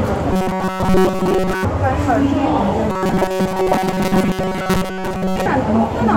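From 0.33 to 1.65 s and again from 2.90 to 5.46 s, there's robotic sound from repeated short buffers: a rigid metallic buzz at 188 Hz, likely from most of the audio being replaced by replays of a roughly 5 ms chunk.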